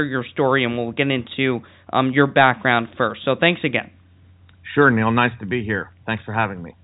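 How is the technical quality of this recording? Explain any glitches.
No glitches or faults heard.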